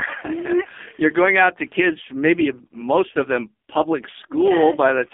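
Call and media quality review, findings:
Buzzy, synthetic, thin speech, throughout the clip. Nothing above 3.5 kHz and little below 250 Hz. Probable component: AMR narrowband mobile codec (AMR-NB) on a phone leg. Heavy damage, consistent with a low mode near 5 kbps: too few pulses per 5 ms subframe to drive the vocal-tract model, so the sound is rebuilt coarsely.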